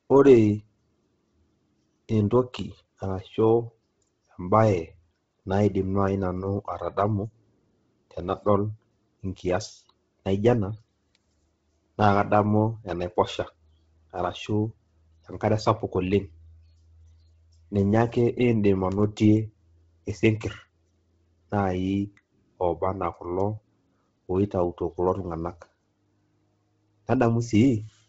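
Speech carrying heavy Bluetooth LC3 compression throughout, likely from a low-bitrate LE Audio link. It sounds breathy and grainy, and a spectrogram shows nothing above 7.8 kHz, with noisy, patchy upper bands.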